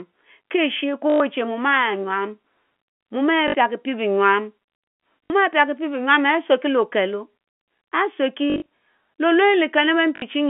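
Short robotic stutters with a 50 Hz buzz cut into the speech at 1.1, 3.48, 5.25, 8.5 and 10.16 s. Each lasts 60 to 120 ms, and the one at 8.5 s is split over 160 ms. This is packet loss with last packet repeated, likely 20 ms packets replayed out of step with the pitch.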